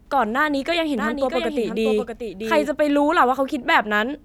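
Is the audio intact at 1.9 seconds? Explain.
No. A doubled audio track runs from 0.98 to 2.68 s. A full-band copy, roughly 5 dB quieter, trails about 0.7 s behind, likely from a second, slower capture path. On a spectrogram it appears as a fainter, time-shifted repeat of the speech pattern that starts and stops abruptly.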